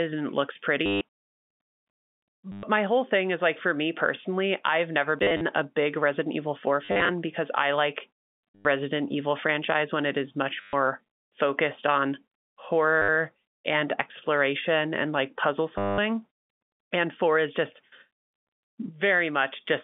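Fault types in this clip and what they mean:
Packet loss with last packet repeated: eight dropouts between 0.86 and 15.98 s, each 60 to 200 ms long, where the receiver replayed its last packet. The repeats buzz near 100 Hz, which fits 10 ms packets, giving a robotic stutter after "exploration and like puzzle".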